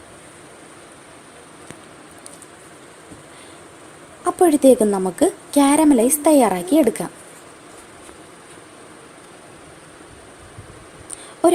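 No technical fault can be heard anywhere in this audio. Nothing in the sound points to a problem in how it was captured, processed or delivered.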